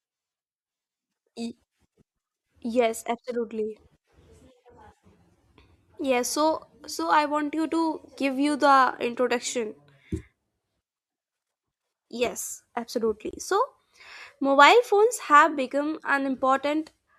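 At 13.31 s the speech breaks off for about 24 ms, until 13.33 s. This is a gap at a join of encoded pieces. The audio was encoded in separate sections and then spliced together untrimmed. The encoder's start-up silence and final-frame padding stayed in at the seam. It sounds like a tiny dropout with edges smeared by the codec. The speech then resumes exactly where it left off.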